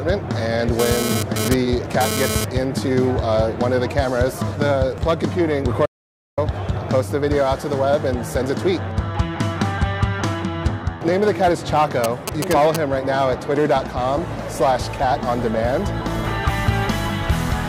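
GSM phone buzz runs from 0.79 to 2.45 s. A 2G phone nearby was transferring data, bursting about 217 times a second, and the audio circuit rectified those radio pulses. The result is a hard, raspy 217 Hz buzz, rich in harmonics, that comes and goes, sitting about 3 dB below the sound.

An audio dropout to silence follows at 5.86 s and lasts 0.52 s, until 6.38 s. The sound cuts off abruptly and returns just as abruptly, with no room tone in the gap. This is likely a lost input, such as a disconnected device, failed link or stray mute, while recording continued.

GSM signalling bursts appear from 12.04 to 12.76 s. A nearby 2G phone sent only short groups of radio bursts, still at about 217 Hz, which the audio circuit rectified. They are heard as a galloping dit-dit-dit of brief buzzes, roughly 5 dB below the sound.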